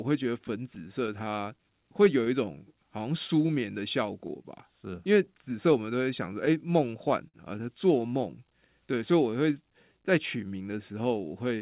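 Right through the clip there's clock drift between sender and receiver: the sender's clock runs about 5% slow, so the receiver's buffer keeps running short and it has to make up the difference. From 0.09 s to 11.44 s you hear the repeated timing corrections, with short pieces repeated so the speech plays at roughly 97% speed and stretches by around 400 ms. That gives a slightly dragging, uneven rhythm. Between 0.47 s and 7.36 s there are also scattered short gaps, around twenty of them, the longest about 50 ms. Each one is patched by carrying the last sound forward, so you get brief smears and small hiccups. All of this sits on top of the narrow G.711 call sound, which has nothing above 4 kHz.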